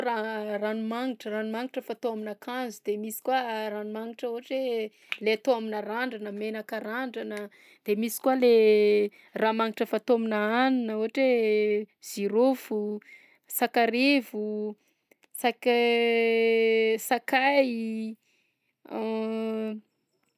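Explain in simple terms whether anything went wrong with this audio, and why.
Nothing went wrong with it.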